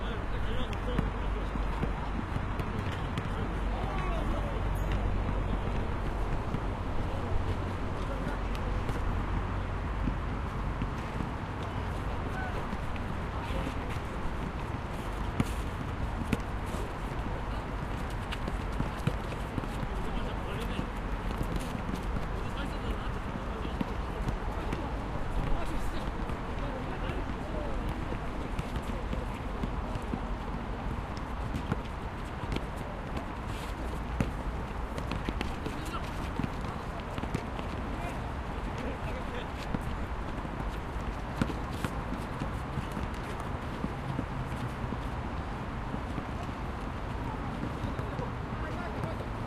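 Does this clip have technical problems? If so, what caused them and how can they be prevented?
Yes. An adaptive stream starting at a low bitrate affects the sounds from 0.0 to 6.0 s. The player opened on a low-quality version, which fits HE-AAC at 20 kbit/s, so the treble is missing or synthetic and codec artefacts are stronger. At 6.0 s it steps up without a gap to a better version, which fits AAC-LC at 96 kbit/s, though nothing above 14.8 kHz is present. To prevent this, begin the stream at a higher bitrate or buffer until the connection has been measured.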